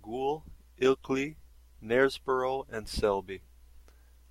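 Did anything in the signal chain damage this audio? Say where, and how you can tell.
No, nothing in the signal chain damaged this speech recording. At no point does the sound carry a mark that points to trouble at any stage between capture and playback.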